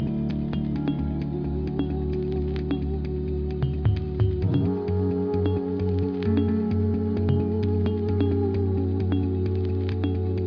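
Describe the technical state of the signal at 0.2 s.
At 0.2 s the audio is intact, with no fault present at that moment.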